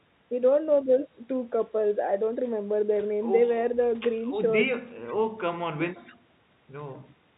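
Nothing stood out on listening to this speech clip, which comes through a WebRTC call path whose G.711 mu-law coding at 64 kbps leaves nothing above 4 kHz.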